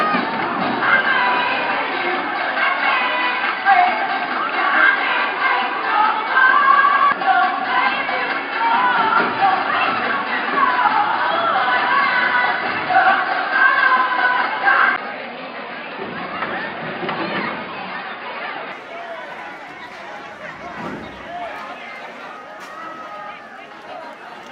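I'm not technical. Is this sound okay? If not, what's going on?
No. From the start until about 18.7 s the sound is dull and boxy, with nothing above roughly 5 kHz, a faint different background, and a slightly different loudness. It then clears abruptly with no gap. That fits an input switched to a poorer device, likely a headset or lesser microphone.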